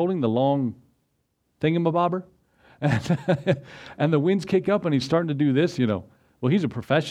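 Nothing stood out on listening to this audio.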